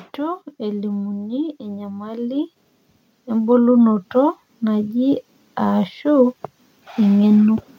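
From 0.16 s to 2.53 s the level climbs steadily by about 6 dB, a case of automatic gain rising: the gain control judged the input too quiet and raised its gain gradually. Because it acts on the whole signal, the speech and the background noise swell together. The same thing happens again from 3.25 s to 7.53 s, a slower rise of about 7 dB over more than four seconds.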